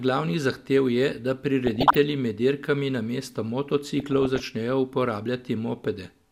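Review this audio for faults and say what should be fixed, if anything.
DAB burbling in the speech at 1.65 to 1.97 s and 3.97 to 4.47 s: residual bit errors corrupt sub-band samples and scale factors, causing short noise blips in single sub-bands and brief level jumps. A spectrogram shows isolated frame-length blocks flaring in single bands. Improve reception or antenna placement so errors stay within the error correction's reach.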